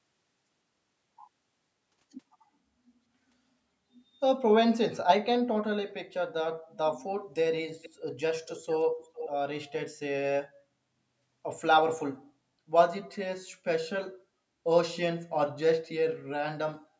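From 7.82 to 7.90 s and 9.02 to 9.30 s, a delayed copy of the speech returns about 0.45 s late, first roughly 20 dB down, then nearer 10 dB. This echo leak likely comes from a far-end echo canceller letting residue through, visible as weak, smeared repeats of earlier spectrogram patterns.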